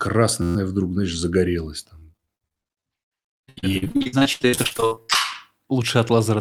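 From 0.42 to 0.56 s, just before "вдруг знаешь загорелось", there is a system hang loop. The machine stalled while the audio hardware kept replaying the same ring buffer. One slice of about 11.6 ms, which fits a 512-sample buffer, repeats exactly twelve times and produces a steady buzz at about 86 Hz. Very little of the speech is lost. Because the repetition is identical and perfectly periodic, it forms a pitched tone, unlike the irregular chop of packet loss.

From 1.99 to 5.16 s, right after "вдруг знаешь загорелось", there is repeated packet loss with a robotic sound. Audio data kept arriving late or not at all. Dozens of short holes, the longest about 75 ms, were each patched by stretching out the preceding sound, and about 41 percent of the stretch is concealed this way. The speech turns choppy, with pieces missing. The gaps are irregular, which separates this from the exact, buzzing repetition of a hang loop.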